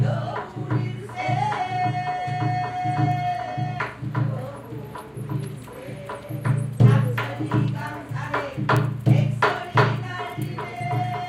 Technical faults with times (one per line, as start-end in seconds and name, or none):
3.12 bit error spike
8.77 bit error spike